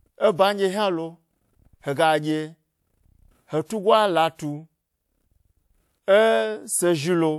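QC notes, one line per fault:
3.65–3.70 s, pre-echo: about 46 ms of hiss before a sharp speech attack, as block-wide codec quantisation noise leaks into the quiet moment ahead, smearing the onset.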